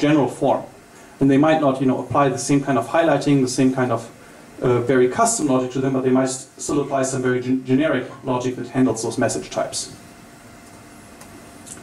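From 5.42 to 8.90 s, channel delay (comb filtering): one channel lags by around 20 ms, and the mono sum cancels at closely spaced notches from around 20 Hz, sounding rough and slightly doubled.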